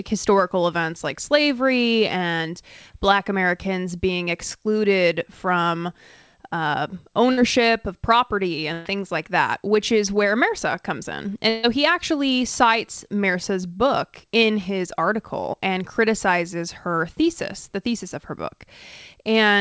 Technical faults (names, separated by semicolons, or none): short concealed packet loss; burst of packet loss